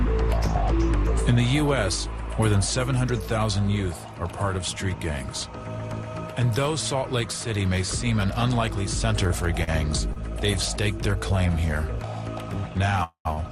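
Three short stalls from late packets come close together, at 9.27 to 9.32 s, 9.64 to 9.69 s and 10.13 to 10.18 s. In each, the jitter buffer ran dry for a moment, so the receiver held the last sound for 23, 37 and 28 ms until the packet arrived, then carried on from the same point. The result is a brief smeared hold with a faint buzz or dip, not a dropout, since nothing is lost.

At 13.04 to 13.27 s a call audio freeze fills 215 ms. This was likely caused by packets being held up long enough to empty the buffer. The held sound decays as a fading buzz or hiss, and about 100 ms of it falls to silence. That fall to silence, and the much greater length, separate it from the stalls. A further short stall follows at 13.33 to 13.39 s, holding the sound for 39 ms.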